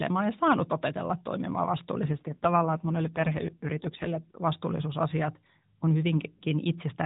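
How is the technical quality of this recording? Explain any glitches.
The recording is narrowband mobile speech with one clear glitch: a stretch where the voice turns rougher.

AMR rate drop, 2.06 to 4.35 s: the speech passes through the AMR narrowband mobile codec, which has no content above 4 kHz and, at the start of the clip, is only lightly coloured. At this point the encoder drops to a lower rate, the sound pointing to a fall from about 12.2 to 5.9 kbps, so fewer bits describe the pulses exciting its vocal-tract model. The band and continuity stay intact, but for these two seconds the voice becomes buzzier and more synthetic.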